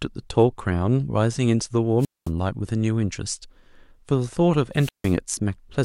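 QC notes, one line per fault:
1.99–2.31 s and 4.75–5.16 s, wireless microphone squelch dropout: twice the speech briefly fills with hiss, then drops into a near-silent hole, about 218 ms the first time and 157 ms the second, before coming back. That's the radio link from an analogue FM mic fading so far that the receiver's squelch shuts the output off. The hiss is the noise floor surging as the carrier weakens, and the gap is the mute itself.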